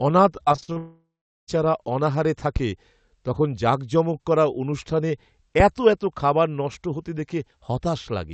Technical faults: repeated packet loss (robotic sound); long network dropout

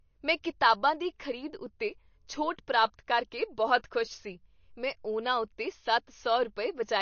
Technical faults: MP3 compression

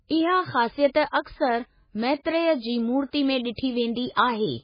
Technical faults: MP3 compression

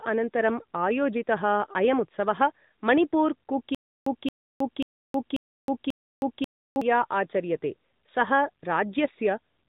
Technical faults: AMR narrowband mobile codec; stutter with silent gaps

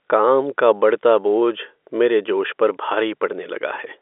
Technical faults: none

